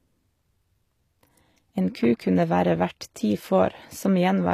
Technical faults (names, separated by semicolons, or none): HE-AAC compression